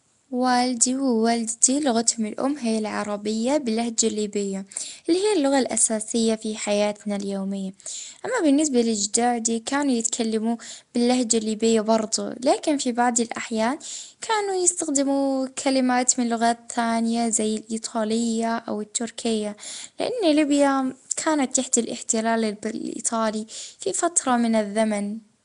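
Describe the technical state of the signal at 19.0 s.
Nellymoser compression is plainly audible at 19.0 s, as it is throughout the speech. The voice carries a rough, hissy halo and a smeared, underwater quality, and nothing remains above 10.6 kHz. The likely cause is the Nellymoser Asao codec, which spends a fixed, small number of bits on each short block, so weak bands get nothing and are filled with noise. The degree of damage fits a rate around 44 kbps.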